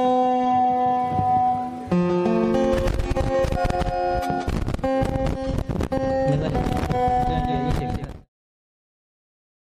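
Nothing stood out on listening, apart from an ordinary smooth fade-out that eases the sound away from around 8 s to 8.3 s.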